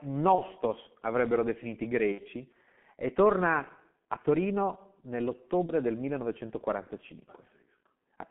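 G.723.1 codec throughout: the speech is squeezed into 150 Hz to 3.4 kHz with a slow-updating voice model, which fits about 6.3 kbit/s, leaving it muffled, hoarse and smeared.

VoIP packet loss concealed by the speech codec at 0.35 s, 2.12 s and 5.66 s: the decoder extends the last pitch and filter into a fading buzzy tone or coloured noise. The gaps fit one 30 ms frame at 0.35 s and 5.66 s, and two frames, 60 ms, at 2.12 s.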